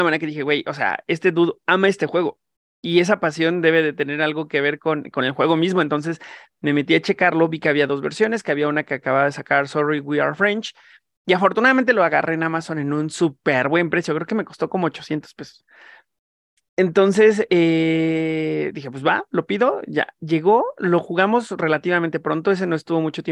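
From 2.85 to 4.35 s, right after "dude ama este juego", a resampler restarted on every block. Each 50 ms block was converted from 48 kHz to 44.1 kHz separately. The block edges lacked neighbouring samples. That leaves a ticking buzz at 20 Hz, ending before "que ver con con".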